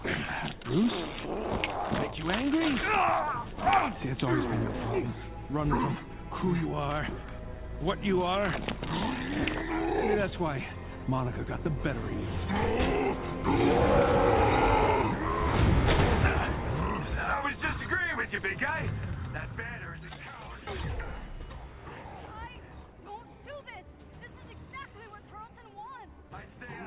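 No technical faults are present.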